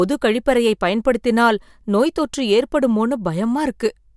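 Listening to this speech recording, nothing stood out as a technical problem.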